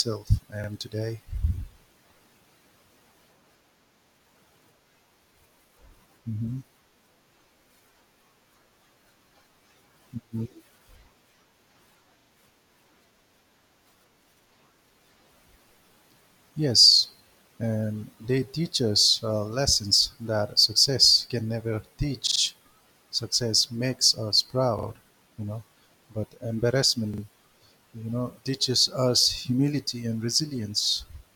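At 0.64, 22.27 (after "that success can never"), 24.79 (after "makes us") and 27.14 s, a repeated buffer: new audio arrived late, so the same 43 ms piece, fitting a 2048-sample buffer, replays up to three extra times with hard joins. It makes a stutter rather than a dropout's silent gap.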